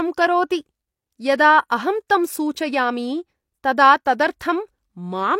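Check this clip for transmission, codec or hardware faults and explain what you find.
Two brief pre-echo artefacts show up in this speech. The first is at 1.38 s, right before "अहं तं सूचयामि तदा", and the second at 4.39 s, just after that same phrase. The codec spreads quantisation noise across its whole transform block, so when a sharp onset sits late in the block, noise sized for the loud part leaks into the quiet moment ahead of it. Here that leak lasts about 14 ms and 13 ms, heard as a short hiss just before each attack, which comes out softened and smeared.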